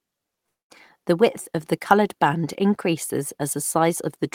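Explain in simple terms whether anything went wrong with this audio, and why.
From about 0.46 to 0.71 s, the sound stops and about a quarter of a second of near silence follows before the speech picks up again exactly where it left off. Nothing is skipped; the speech simply runs about 0.24 s later than before. This is a call audio freeze. The likely cause is that the call's sound data was held up in transit, so the receiving end ran out of audio to play and had to wait for the delayed data to arrive.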